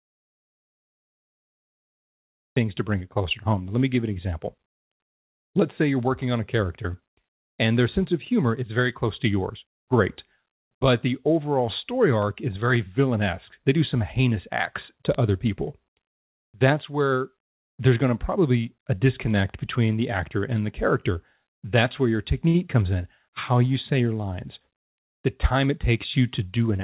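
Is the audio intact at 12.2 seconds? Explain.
No, there's a bit error spike at 12.22 s, right between "the overall story" and "is very villainesque". A single bit flipped in one sample, so its value jumped by a power of two and then snapped straight back. You hear it as one sharp, broadband tick that has nothing to do with the speech around it. The call-path sound around it is narrow, with nothing above 4 kHz from the G.711 mu-law link.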